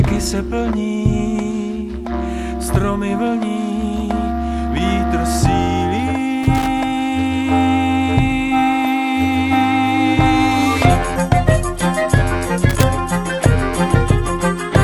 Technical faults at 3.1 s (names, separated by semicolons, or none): none